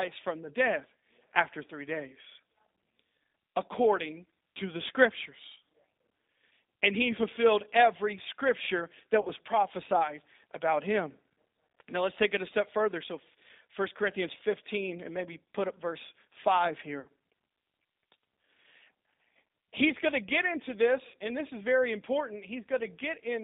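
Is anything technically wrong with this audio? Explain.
Yes. Throughout, the G.729 codec limits the speech to about 200 Hz to 3.7 kHz and gives it a rough, synthetic texture consistent with 8 kbit/s model-based coding. A spectrogram shows an empty band above 3.7 kHz.

VoIP packet loss concealed by the speech codec occurs at 9.21 to 9.30 s (about 40 ms lost), 17.00 to 17.08 s and 21.08 to 21.16 s (about 60 ms each). At each gap the decoder extrapolates from its last pitch and filter and lowers the gain frame by frame. On a waveform this is a short, smoothly decaying stretch.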